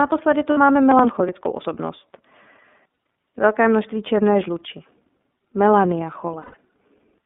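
Throughout, the speech carries the iLBC codec. The band runs only from about 200 Hz to 3.6 kHz, and the voice has a plainly audible rough, synthetic edge. Each block of excitation is coded on its own, which fits the 13.33 kbps mode with 30 ms frames. This steady, band-limited colouring is present from start to finish, which separates it from the short events below.

At 0.51 s come lost iLBC frames, about 60 ms of missing audio. The decoder fills the hole by repeating the last pitch cycle with added noise, so the gap sounds like a briefly held, slightly buzzy vowel. Because each frame stands alone, the voice snaps back clean almost immediately.

From 0.91 to 1.66 s there is processor overload crackle. Small buffers of roughly 10 ms are repeatedly not finished in time, around twenty of them, and each is simply skipped. The result is a gritty tearing of hard-edged micro-gaps riding on the speech. 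It is a rough, broken texture spread over most of a second, unlike the smooth held tone of concealment.

At 2.93 s another 30 ms of lost iLBC frames gives a very brief buzzy hold. At 6.41 s a longer loss of about 120 ms follows. There the repeated pitch cycle is audibly stretched and fades out before the speech resumes.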